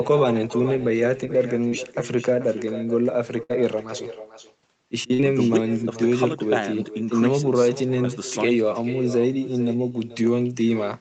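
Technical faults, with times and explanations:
Throughout: echo with no canceller. Every stretch of speech is trailed by a second, fainter copy, about 14 dB below the original, arriving roughly 400 ms later. The far end is playing the call through a loudspeaker, and its microphone hears that playback. Nothing cancels it, so the talker's own speech returns after the network round trip. The copy sounds thinner because it has passed through a small speaker and a room.
1.69–1.73 s: short concealed packet loss. About 20 ms of the call arrived too late or not at all. The decoder covered the hole by extending the sound just before it for about 17 ms, then blended back into the real signal. The result is a tiny smear or wobble in the speech rather than a silence.
3.43–3.51 s and 5.13–5.21 s: burst of packet loss. Each time, about 60 ms of consecutive audio was lost. The receiver kept the last sound going, for about 63 ms in the first case and 56 ms in the second, while fading it down. 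This produces a held buzz or fading hiss in place of real speech. Playback then picks up further along, and the missing slice is simply gone.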